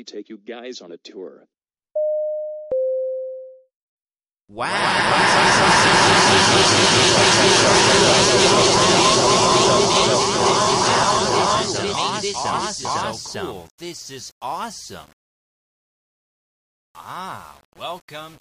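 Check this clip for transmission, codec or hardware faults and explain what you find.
One fault appears in the second half of the clip. From 10.61 s to the end, the sound turns grainy, with distortion that tracks the signal. Quiet passages get the roughest, and the error sits roughly 35 dB below the signal level. This is likely low bit depth without dither: samples rounded to very few steps, which fits about 7-bit resolution. Without dither, the rounding error follows the waveform instead of becoming steady hiss.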